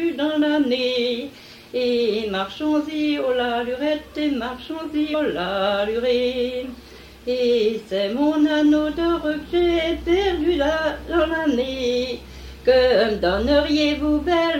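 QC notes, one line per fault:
5.13 s, damaged data in a compressed stream: a brief disturbance of under 20 ms breaks the sound. Part of the encoded data at this point was corrupted, so the decoder could not read the affected frames correctly. It lost frame sync, searched for the next valid frame header and resumed normal decoding from there.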